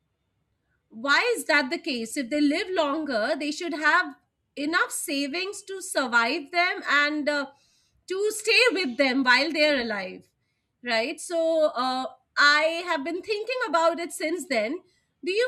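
No technical faults are audible anywhere in this speech recording.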